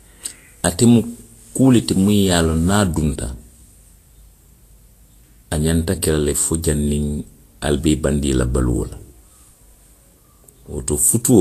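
From start to end, the speech carries plainly audible codec damage, likely Vorbis compression at a low setting. Nothing sounds above 14.2 kHz, so the top of the spectrum is simply gone. Below that edge, the treble is quantised coarsely. Fine detail turns into noise of similar energy. Sibilants sound hissy and grainy. Tonal parts take on a rough texture. Consonant attacks lose their edge and blur. The damage fits a bitrate near 36 kbps.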